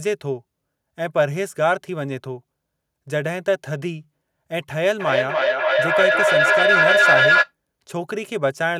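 From 5.0 to 7.54 s the speech gets feedback echo between two devices, words returning roughly every third of a second and building to about 5 dB above the talker.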